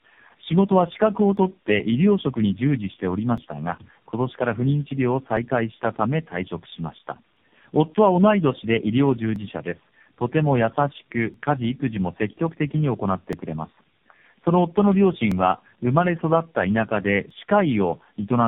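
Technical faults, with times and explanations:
Throughout: tandem speech coding. The speech went through four speech coders in a row: AMR-NB at several rates, with a CVSD stage before the last AMR-NB one, and G.711 mu-law hops in between. Each stage re-codes the previous stage's damage, so it ends up rough, warbly and muffled, with nothing above 3.7 kHz.
1.37 to 17.31 s: periodic USB or driver dropouts. Every 2.0 s a few milliseconds of audio simply go missing, skipped rather than silenced, about ten times in all. Something is stalling the bus or driver on a fixed schedule, so you get evenly spaced ticks over the speech.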